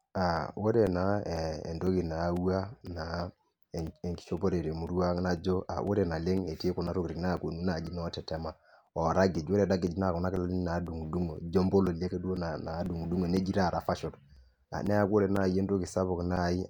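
From 0.37 s to 16.37 s, periodic USB or driver dropouts cut into the speech every 0.5 s. Something stalls the audio path on a fixed cycle. Each time, a few milliseconds are replaced by silence. About thirty regular ticks result, audible only under signal.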